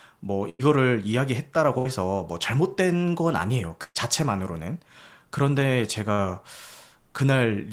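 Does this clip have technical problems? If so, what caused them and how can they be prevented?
Yes. At 0.49 to 0.64, 1.78 to 1.90, 3.84 to 3.98 and 6.12 to 6.21 s the speech smears into a short held buzz or fading hiss, then jumps ahead with 60 to 120 ms missing. This is a burst of packet loss that the receiver concealed by stretching the last sound. Forward error correction or a deeper jitter buffer would prevent it.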